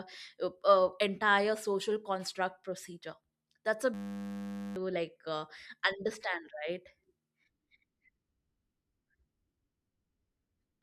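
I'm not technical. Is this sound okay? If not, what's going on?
No. From 3.94 to 4.76 s there is a system hang loop: the computer froze, replaying one 10 ms piece as a steady 100 Hz buzz, losing about 0.7 s of speech.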